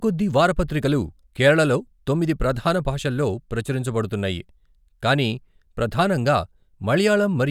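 Speech, with no audible faults.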